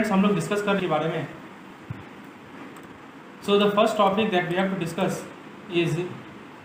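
A stretch of audio was discarded while later audio was already queued, so at 0.79 to 0.81 s the audio makes a skip ahead. Roughly a second and a half is missing, and the two sides join almost directly with no silence filling the jump. The jitter buffer then held more audio than it aims for and trimmed short pitch-period pieces repeatedly to shed the delay. This jitter buffer speed-up runs from 0.95 to 3.82 s at 117 percent speed, removing about half a second, and again from 4.38 to 5.03 s at 106 percent, removing around 50 ms. The pitch stays the same while the audio sounds hurried.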